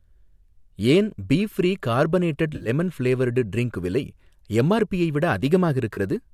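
Speech with two brief smeared, noisy patches: one from 2.54 to 2.69 s, just after "ஏன் பீ ஃப்ரீ கார்பனேடட்" and before "ஃப்ளேவர்டு ட்ரிங்க் விலை எம்ஆர்பியை", and a shorter one from 5.94 to 5.98 s. This is AAC frame loss with concealment in what is likely a low-delay AAC stream. The decoder bridged the gaps from the last good spectrum. About 80 ms went missing in the first patch, scattered in runs of up to around 50 ms, and 30 ms in the second.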